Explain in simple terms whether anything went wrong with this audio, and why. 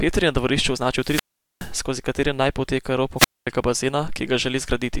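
Yes, something went wrong: the speech cuts out twice because of a wireless microphone squelch dropout. The radio link from the microphone weakened, so the receiver muted its output to keep from passing noise. Just after "je na dvorišču", around 0.95 to 1.77 s, hiss rises and the sound goes nearly silent for about 0.42 s before returning with "skozi katere naj poteka". After those same words, at 3.16 to 3.47 s, a shorter mute of about 0.23 s follows.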